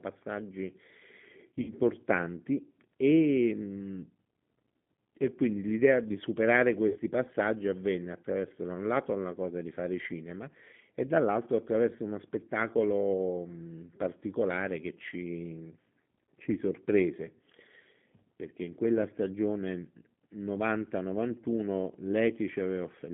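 The G.729 codec runs throughout at 8 kbit/s, confining the line to roughly 150 Hz to 3.5 kHz. Speech is rebuilt from a vocal tract filter, a pitch predictor and sparse pulses, so it sounds plainly rough and synthetic, with no top end.

VoIP packet loss concealed by the speech codec occurs at 1.62 to 1.74 s and again at 6.89 to 6.98 s. The gaps are about 60 ms and 40 ms, which fits three and then two lost packets. The decoder fills each gap by extending its last pitch and filter at falling gain, producing a stretched, fading buzzy tone or coloured noise. The voice stays weak or distorted for tens of milliseconds just after each gap while the decoder's state recovers.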